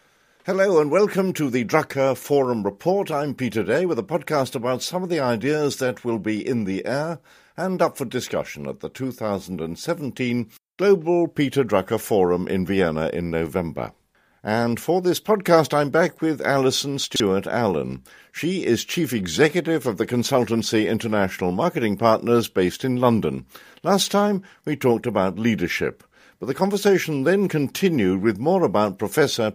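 At 17.04 to 17.2 s there's chunks out of order: a 40 ms chunk lands three chunks late, so the speech briefly jumbles across three hard joins.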